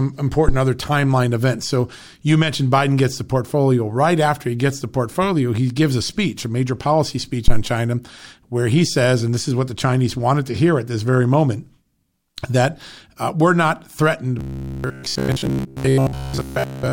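Right at the start, around 0.49 s, there's a phantom power thump, and a second one hits at 7.48 s and runs to about 7.66 s. Both are the classic low, dull thud you get when a supply is switched on a live input and the voltage step pushes through the coupling capacitors. They die away fast, the first in about 28 ms and the second in about 40 ms, so they come across as short, deep knocks rather than a long boom.

From 14.39 s to the end, the voice turns into robotic sound from repeated short buffers. It becomes a stiff, metallic buzz pitched at 66.8 Hz, which points to a repeated chunk of roughly 15 ms. The rhythm of the speech still comes through, but most of it is being replaced by the loops. The likely cause is audio arriving too late, so the playback keeps looping the last little slice to fill the gap while the real signal gets dropped.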